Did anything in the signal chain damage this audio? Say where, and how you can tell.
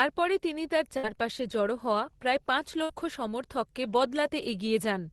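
Yes. A burst of packet loss at the network stage hits 0.97 to 1.06 s, between "তিনি তার" and "জড়ো হওয়া প্রায় পাঁচ", and again at 2.83 to 2.92 s, right after "জড়ো হওয়া প্রায় পাঁচ". In each case consecutive packets never arrived in time. The receiver's concealment stretched the last speech for about 60 ms, turning it down as it went, and then playback jumped ahead, so about 60 ms of speech is missing.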